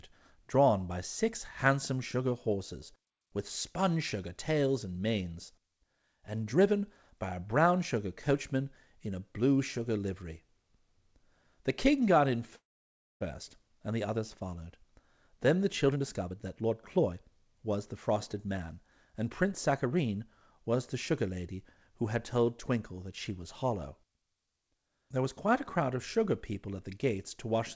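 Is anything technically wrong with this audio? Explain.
Yes. At 12.56 s, right after "king got in", the speech stops dead: a short fading tail, then about 0.59 s of silence, and it resumes at 13.23 s with nothing lost, just late. That's a call audio freeze, likely from packets delayed in transit so the jitter buffer emptied; the receiver stretched the last sound briefly, then waited about 0.65 s before picking up exactly where it left off.

From 15.86 to 21.29 s the talker sounds rushed, roughly 12% faster but at normal pitch. That's a jitter buffer speed-up: after the stall, the buffer held surplus audio, so the receiver trimmed many tiny pitch-period slices, around 0.7 s in all, to pull the delay back down. The call path itself is band-limited, with nothing above 8 kHz, fitting a G.722 wideband codec.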